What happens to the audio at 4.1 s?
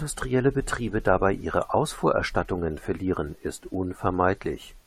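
Nothing goes wrong at 4.1 s; the speech plays through that moment intact, with no dropout, click or distortion.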